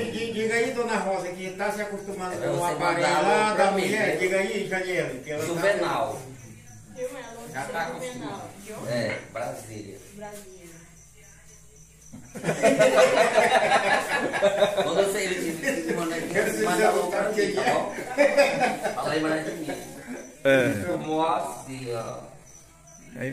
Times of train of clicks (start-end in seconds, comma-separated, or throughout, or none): 16.03-17.14